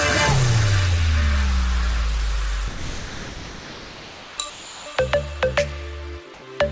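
From 2.68 to 4.38 s, again from 4.50 to 4.86 s, and briefly at 4.96 s, the sound gives way to steady noise. This is sound dropped by the voice detector, likely because it judged active sound to be background and stopped sending.

From 6.34 to 6.42 s, comfort noise replaces the background. The real background sits about 22 dB below the loud parts. It turns into a featureless hiss about 2 dB quieter, likely because transmission paused.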